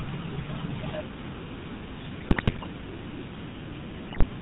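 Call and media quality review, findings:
GSM full-rate codec, whole clip: buzzy, gravelly roughness on the speech and nothing above 4 kHz. Damage is plainly audible. Sounds like the old 13 kbps full-rate path. The vocal tract is modelled and driven by a coarse pulse train built from every third excitation sample, so the fine detail turns to buzz. Probably the legacy GSM leg of the call.

GSM bit errors, 2.2 to 2.67 s: squawks, pops and gargling in the speech, with the spectrum bending and the level jumping frame to frame. Fits corrupted filter, pitch and gain values hitting the decoder, at something like 5% bit errors on a weak radio link.

Same GSM bit errors again at 4.1 to 4.24 s, a shorter burst with a similar garbled squawk and a similar error rate. Same weak link, briefly worse again.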